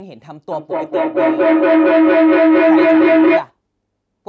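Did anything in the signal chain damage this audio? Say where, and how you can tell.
Yes. A feedback howl runs from 0.5 s to 3.53 s, reaching about 15 dB above the speech. It comes from the acoustic path in the call: two devices in one room form a microphone-to-loudspeaker loop whose gain exceeds unity, so each trip reinforces the last. The tone settles near 300 Hz and pulses at roughly a fifth of a second, the loop delay. A spectrogram shows a horizontal line at that frequency, banded at that rate, with the call's 8 kHz ceiling above.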